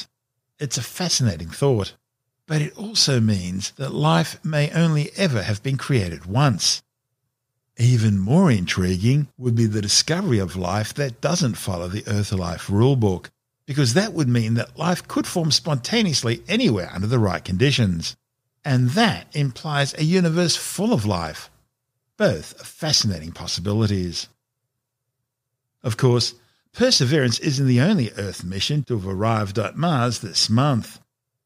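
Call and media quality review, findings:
No faults found: the speech signal holds steady throughout, with no dropouts, level jumps, distortion or timing irregularities to trace to any component.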